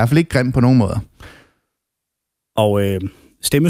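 Nothing in this short speech recording points to a technical fault, and the signal holds steady and continuous throughout.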